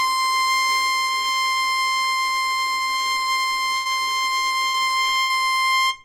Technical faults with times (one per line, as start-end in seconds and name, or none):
3.75-3.87 burst of packet loss
4.03-4.08 short concealed packet loss
4.68-4.76 burst of packet loss
4.78-4.81 short concealed packet loss
5.20-5.31 burst of packet loss
5.67-5.84 repeated packet loss (robotic sound)